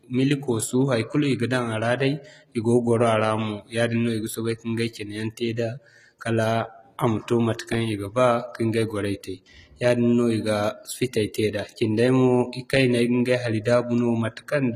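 It's a speech recording with HE-AAC compression damage running right through it, plainly audible. Nothing survives above about 14.9 kHz, and the treble sounds rebuilt by band replication rather than real, which fits a low bitrate around 20 kbps as the likely cause.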